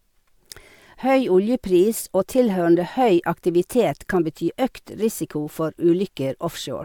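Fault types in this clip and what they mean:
No faults detected.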